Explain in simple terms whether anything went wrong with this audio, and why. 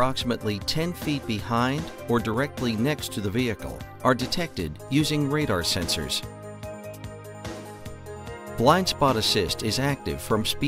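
Yes, two small glitches. At 2.34 s and again at 4.28 s the sound jumps ahead slightly. That's likely a dropped buffer (overrun): the recorder fell behind, lost a sliver of about 20 ms, and stitched the gap shut.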